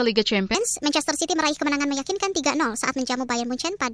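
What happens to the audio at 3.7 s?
At 3.7 s the wrong sample rate fault, running from 0.55 s to the end, is in effect. Playback runs 1.38 times fast, which fits 16 kHz audio played at 22 kHz. Pitch rises 5.55 semitones and sounds high and hurried. Spectrograms show harmonics stretched upward and events compressed in time.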